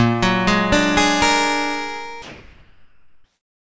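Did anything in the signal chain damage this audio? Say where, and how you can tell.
Yes. From 2.22 s to 3.74 s the real background, about 38 dB below the loudest parts, gives way to comfort noise, likely from discontinuous transmission in call processing. The spectrogram shows smooth, textureless noise under 8 kHz; the waveform shows a flat band with a level step of about 3 dB.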